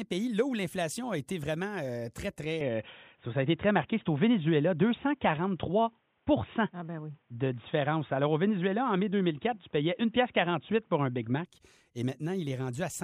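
At 2.61 s the speech abruptly turns dull and boxy. Nothing above 3.8 kHz survives, so the sibilants and air are gone. The level shifts by around 5 dB, and a faint new background noise appears, far below the speech. There is no gap at the change. This is likely an input switched to a poorer device, a narrower-band microphone taking over mid-recording. At 11.45 s the full, brighter sound returns just as suddenly.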